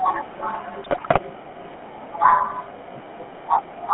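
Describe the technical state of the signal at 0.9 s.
At 0.9 s the signal sits inside a burst of GSM bit errors running from 0.84 to 1.19 s. Corrupted bits are reaching the speech decoder across 16 frames, which points to a badly degraded radio link. When the filter, pitch and gain parameters arrive damaged, each affected frame is rebuilt with a warped spectral shape or a wrong level, so the speech breaks up into squawks, pops and a gargling texture.

Underneath that burst, the whole clip carries the GSM full-rate codec. The speech is rebuilt from a vocal-tract model driven by a sparse, regularly spaced pulse excitation, which is consistent with the 13 kbps full-rate coder. Only the band from 150 Hz to 3.5 kHz comes through, so the sound is thin and muffled at the top. The coarse excitation gives the speech a plainly audible buzzy, gravelly roughness.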